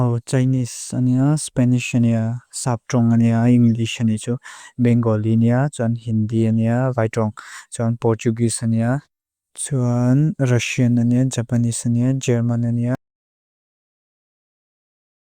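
At 12.95 s the speech cuts off abruptly and the remaining 2.3 s to the end is dead silence, with no room tone at all. This is an audio dropout to silence, likely from the input being lost while recording continued writing silence.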